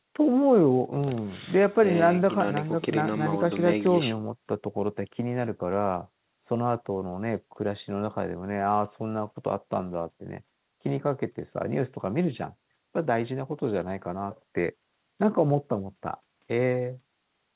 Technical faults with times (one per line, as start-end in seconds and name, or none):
none